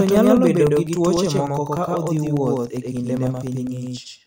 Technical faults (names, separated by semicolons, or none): doubled audio track; periodic USB or driver dropouts